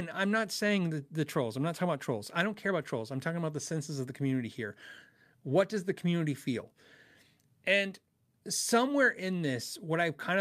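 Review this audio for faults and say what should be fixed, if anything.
Nothing stood out on listening to this speech recording, so there is nothing here that needs fixing.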